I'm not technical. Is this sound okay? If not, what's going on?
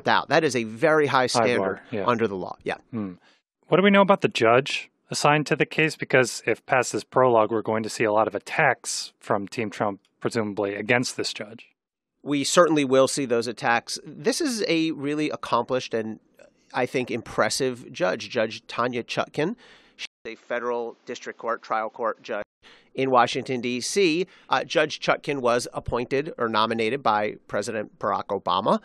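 No. From 20.05 to 22.62 s the speech goes duller and a little quieter, with a faint new background noise and a brief 0.2 s gap at the change. This is likely an input switched to a poorer device, one that drops the crisp top end above 7.6 kHz.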